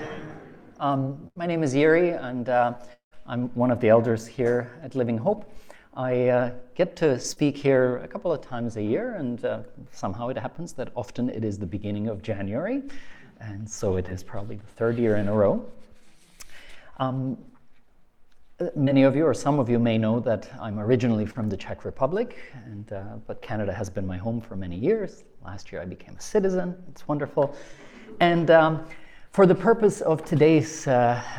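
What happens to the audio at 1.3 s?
A burst of packet loss, 1.27–1.37 s: the receiver holds and fades the last sound for 81 ms, seen as flat, dimming spectrogram bands, then an abrupt restart.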